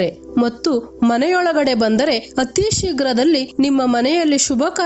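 Gain pumping runs through the whole clip, likely from input gain set far too high with a fast limiter clamping each loud peak. The gain ducks by around 10 dB under every loud sound, squashing the dynamics, while nothing reaches above 8 kHz.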